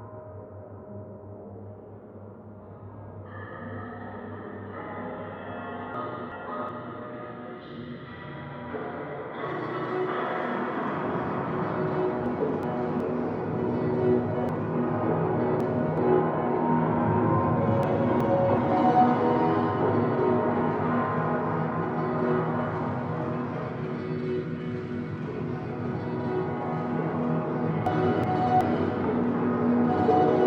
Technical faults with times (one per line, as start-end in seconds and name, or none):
5.94-6.69 chunks out of order
12.26-13.00 chunks out of order
14.49-15.98 chunks out of order
17.83-18.58 chunks out of order
27.86-28.61 chunks out of order